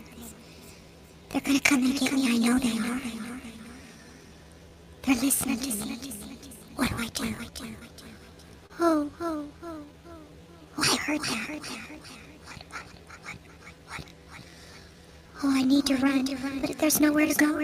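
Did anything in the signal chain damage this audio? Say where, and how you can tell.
Yes. A short stall from a late packet at 8.66 s holds the sound for 37 ms with nothing lost. It is a network/jitter-buffer fault, a held stretch rather than a gap or click.

Jitter buffer slow-down from 9.66 to 10.66 s runs the audio at 92% speed by repeating pitch periods, adding 85 ms. Pitch stays fixed, unlike a clock or resampling drift.

Jitter buffer speed-up from 12.85 to 13.59 s plays at 109% by dropping short pitch periods, roughly 70 ms. The sound is hurried but pitch is unchanged, unlike a tape-style speed error.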